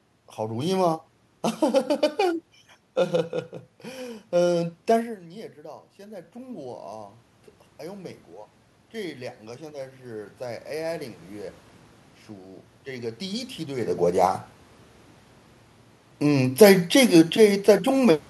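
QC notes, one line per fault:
4.97–14.04 s, automatic gain rising: the input falls by about 14 dB as the talker moves away near 5 s, and the gain climbs about 10 dB to compensate. Voice and room noise swell together, so the waveform envelope and spectrogram noise floor brighten gradually.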